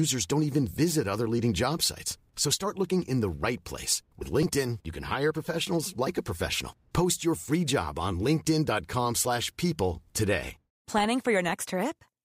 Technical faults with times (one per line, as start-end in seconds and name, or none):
none